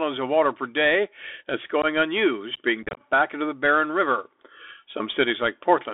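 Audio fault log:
Throughout: Bluetooth CVSD headset codec. The speech is boxed into a phone band of about 300 Hz to 3.5 kHz, which fits a 64 kbps CVSD link. The one-bit delta coding can't track fast swings, so sibilants turn scratchy and a grainy hiss sits underneath.
1.82–1.85 s and 2.83–3.02 s: unconcealed Bluetooth headset packet loss. First, right after "water per day that's", there's about 15 ms of hard dropout. Then, after "unused being" and before "back into the", roughly 100 ms of gaps are scattered over about 140 ms, none longer than about 23 ms. Nothing fills the holes, so the voice sounds chopped.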